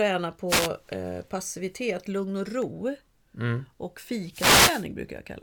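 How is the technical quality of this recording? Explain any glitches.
The speech is marred by two wireless microphone noise hits, at 0.48–0.69 s (just before "eh passivitet lugn och") and 4.30–4.87 s. When the FM radio signal fades, receiver static swells into a brief swish, unlike a steady hiss floor or a silent digital dropout.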